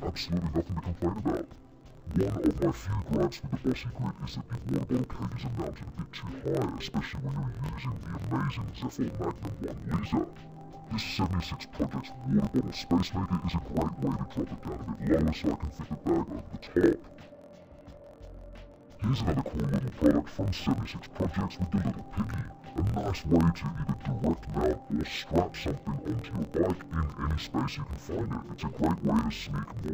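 Throughout, interleaved audio read as planar splits each 23.22 ms block of alternating left and right samples into halves played as two channels at half speed. Unlike a slowdown, the pace stays normal while the pitch drops an octave, with a choppy 43.1 Hz buzz.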